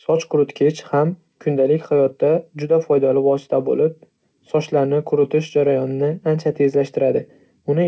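Right through the clip there's clock drift between sender and receiver: the sender's clock runs fast, around 4 percent, so the jitter buffer keeps overfilling. From 0.12 s to 7.87 s you get repeated timing corrections, with the receiver trimming short slices to keep up. The speech runs at about 104 percent pace, with small hiccups at uneven gaps. The call path rolls off everything above 8 kHz, which fits a wideband codec like G.722.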